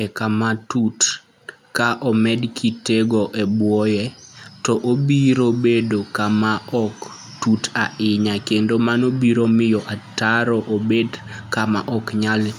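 No technical faults can be heard anywhere in the speech recording.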